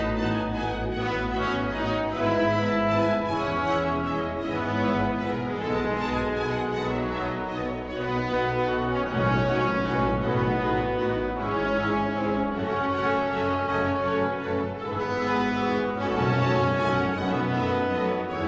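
No technical faults can be heard anywhere here.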